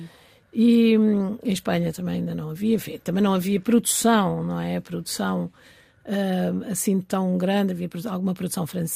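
No dropouts, clipping, glitches or other technical faults are audible anywhere in the recording.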